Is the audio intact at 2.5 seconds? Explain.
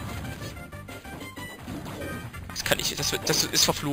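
No. Imaging from sample-and-hold upsampling runs through the whole clip, including 2.5 s. The sound was raised from about 11 kHz to 48 kHz by repeating samples without smoothing. Mirrored copies appear from 5.5 to 11 kHz, about 6 dB below the signal, as a bright metallic fizz.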